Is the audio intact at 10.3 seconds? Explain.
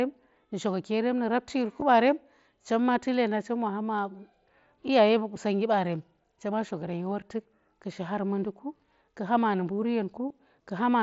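No. At about 10.29 s there is a tiny glitch, a brief, buzzy patch of about 15 ms where the sound is held at full level and warbles faintly as the real audio resumes. This is concealed Bluetooth headset packet loss, which fits two lost frames. Packets on the wideband mSBC link between headset and phone were lost, and the receiver filled the hole by repeating the closest-matching stretch of the preceding waveform.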